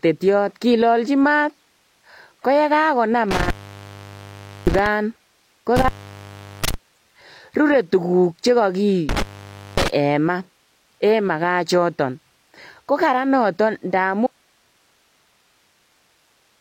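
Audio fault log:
3.31–4.86 s, 5.76–6.74 s, 9.09–9.88 s: intermittent contact. The speech cuts out for about 1.17 s, 0.74 s and 0.55 s as a loose connection opens, with crackle marking each break.
14.27 s to end: audio dropout to a faint residue. The speech stops abruptly, unlike a pause or fade, leaving hiss about 40 dB down, likely because the signal was lost while the later path stayed live.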